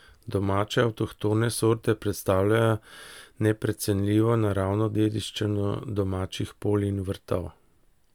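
Listening to the speech in the clip, nothing technical stood out as a problem.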